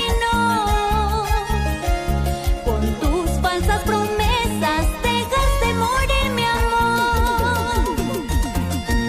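No dropouts, glitches, distortion or level problems turn up anywhere in the recording.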